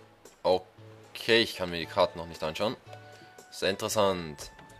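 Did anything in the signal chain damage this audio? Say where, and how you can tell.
Yes, at the driver or buffer stage. There are small, regular ticks spaced exactly 1.0 s apart, running from about 1.55 s to 4.55 s, so four or so in all. Each one is a tiny gap, well under a millisecond, filled with silence. That's the signature of periodic USB or driver dropouts: something on the host stalls the bus or the audio driver on a fixed schedule, and a sliver of samples never makes it through.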